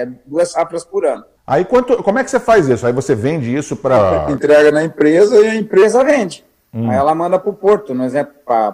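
From 3.97 to 5.82 s there is a section at the wrong speed. The audio plays at 0.893 times its proper rate, so it drags and drops about two semitones. Pitch and tempo fall together, then snap back. It was likely played against the wrong clock.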